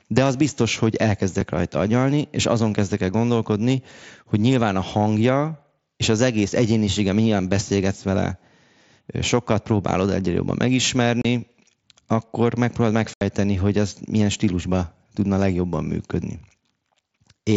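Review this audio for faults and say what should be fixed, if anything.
Unconcealed Bluetooth headset packet loss cuts hard-edged silent holes at 11.22 s (30 ms) and at 13.14 to 13.21 s (75 ms), between "akkor megpróbálod" and "hogy ez milyen". The lost headset packets are replaced by nothing, unlike concealed loss, which smears or repeats sound across the gap. The wideband mSBC link passes the rest of the speech. Improving the Bluetooth connection, for example by reducing distance and radio interference or using a wired or better-buffered link, would prevent these holes.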